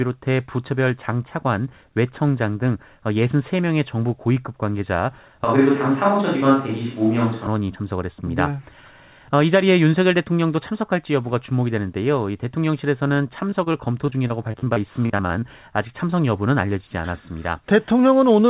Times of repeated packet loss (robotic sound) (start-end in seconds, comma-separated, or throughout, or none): 13.50-15.44